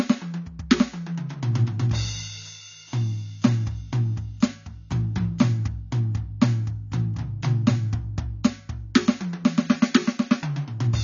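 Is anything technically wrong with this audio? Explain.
Yes. Throughout the music there is plainly audible codec damage, likely AAC compression at a low bitrate, consistent with about 24 kbps. Nothing reaches above 7.1 kHz, so the top is dull, and coarse quantisation of the spectrum gives a smeared, warbling texture.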